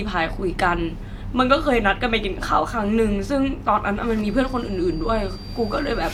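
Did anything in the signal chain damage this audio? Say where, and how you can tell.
Yes. A feedback whistle enters at 4.14 s and continues to the end of the clip: a thin, steady tone at 4.7 kHz sitting well below the speech, roughly 25 dB down, that swells and fades slowly in level. The likely cause is an acoustic loop at the playback end, where sound from a loudspeaker is reaching the microphone with just enough gain that this one frequency keeps circulating and ringing without building into a howl.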